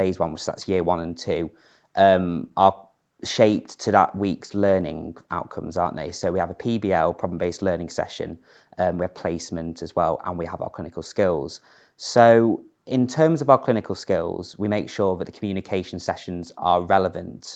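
No faults can be heard anywhere in this speech. The call path's coding leaves nothing above about 8 kHz, so the sound has a bandwidth typical of a call codec.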